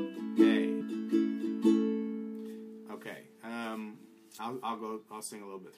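At 0.80 s and again at 4.38 s, compressed frames are skipped: the decoder drops a block of whole frames, so the audio jumps ahead rather than pausing. Each time roughly 300 ms of material is missing, which fits around ten frames of about 26 ms each. The two ends of the gap meet directly, producing a short discontinuity at the join, after which playback resumes later in the sound than it left off.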